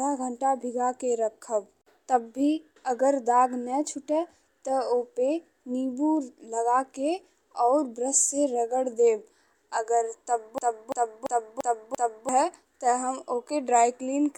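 From 10.58 to 12.29 s, a system hang loop takes over. One 341 ms slice of speech repeats five times, about three per second, looping exactly. The system froze while the hardware kept cycling its ring buffer, which fits a 16384-sample buffer. About a second and a half of audio is lost.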